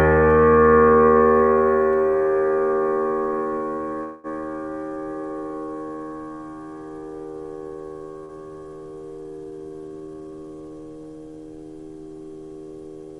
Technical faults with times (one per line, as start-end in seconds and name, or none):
4.03-4.27 call audio freeze
8.25-8.32 short concealed packet loss